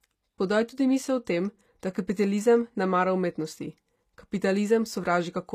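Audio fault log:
Throughout: HE-AAC compression, plainly audible on this speech, likely from low-bitrate coding that fits roughly 24 kbps. The treble is regenerated from lower bands rather than carried, so sibilants come out gritty and metallic, and the band stops at 19.8 kHz.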